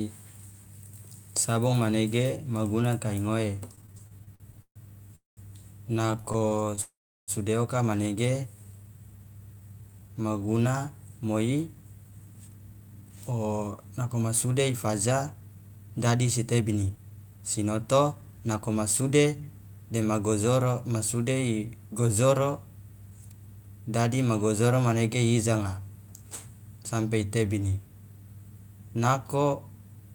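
Between 3.75 and 4.79 s the speech breaks into repeated stalls (stutter): packets arrived late or too slowly, so the jitter buffer drained twelve times. The receiver held the last sound through each wait, filling 359 ms in total and covering about 35% of the span, with the longest hold at 135 ms. Nothing is dropped, but the speech lurches and drags through this stretch.

At 5.16 to 5.40 s comes a call audio freeze. The sound stops and is held for 214 ms, of which about 160 ms is silence, then resumes where it left off. This is likely the buffer running empty while packets were held up in transit, which adds 214 ms of delay.

A second stutter runs from 5.97 to 6.80 s, with thirteen short holds totalling 205 ms and none longer than 28 ms. They cover about 25% of the span.

It runs straight into a longer freeze from 6.81 to 7.31 s, ending just before "sude oka manege". Here 464 ms is held, about 350 ms of it silent, likely from the same late-packet starvation, and the delay grows by 464 ms.

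After "sude oka manege", from 8.54 to 10.53 s, a jitter buffer slow-down rebuilds the reserve by repeating single pitch periods and slices of pauses. It adds 267 ms and plays the speech at 87% speed with unchanged pitch, so sounds are stretched and drawn out.

From 11.75 to 19.41 s a jitter buffer speed-up does the reverse. The buffer held more audio than its target, so short pitch-period pieces were cut out repeatedly, roughly 0.7 s in all. The speech runs at 110% speed with the same pitch and sounds hurried across those 7.7 seconds.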